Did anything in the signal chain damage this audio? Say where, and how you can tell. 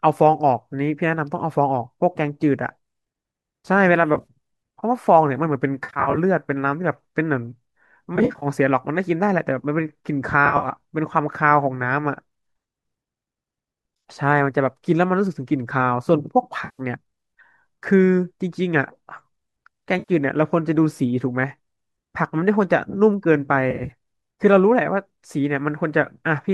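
Yes. Smeared, noisy, phasey patches break into the speech at 4.15–4.27, 5.84–6.18, 8.16–8.46, 10.46–10.68, 16.65–16.81, 19.99–20.12 and 23.71–23.91 s. Each loses between 6 and 19 frames, 60 to 190 ms of audio. This is AAC frame loss with concealment at the network stage. The decoder patches each gap by re-using the last good spectrum, and the short dropout steps fit the roughly 10 ms frames of what is likely AAC-ELD.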